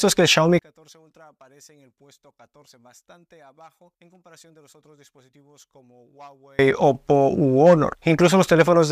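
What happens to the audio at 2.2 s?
At 2.2 s you're inside a stretch from 0.59 to 6.59 s where the level collapses by about 35 dB, leaving only a faint trace of the sound. The likely cause is one channel inverted: with one side's polarity flipped, everything common to both channels cancels when they're summed to mono, so the centre drops out and just the small left-right difference survives.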